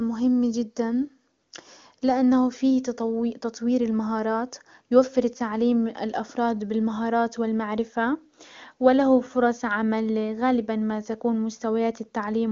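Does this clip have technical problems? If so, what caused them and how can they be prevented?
No, nothing here needs fixing: the band stopping near 7.3 kHz is simply the AMR wideband (HD Voice) codec at work, and the clear, unroughened speech suggests one of its higher rates, around 23.85 kbit/s.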